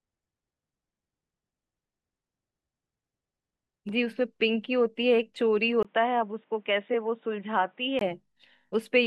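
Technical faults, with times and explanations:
5.83–8.01 s, likely an input switched to a poorer device: after a 20 ms gap, speech turns dull and boxy, nothing above 3.8 kHz, somewhat quieter, with new background noise.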